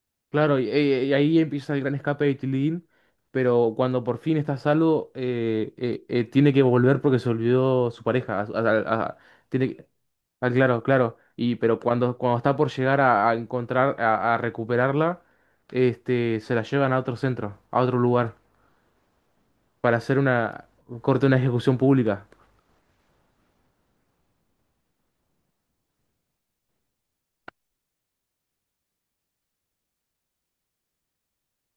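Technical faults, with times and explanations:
No technical faults can be heard in this recording.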